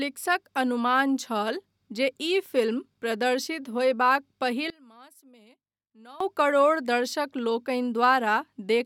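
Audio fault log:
4.7–6.2 s, one channel inverted: speech nearly vanishes, falling about 26 dB, likely because reversed polarity on one channel cancels the shared centre in mono.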